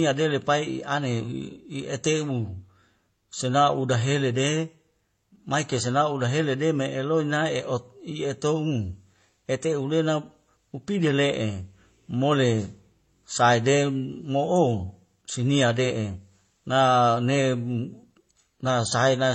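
From start to finish the speech carries the layered damage of transcoding between lossy codecs, likely a low-bitrate MP3 pass followed by an HE-AAC encode. Nothing survives above 8.6 kHz, so sibilants sound dull and clipped. The artefacts of the first stage are heard together with those the second adds. On a spectrogram, energy stops at a hard ceiling near 8.6 kHz. The waveform shows little.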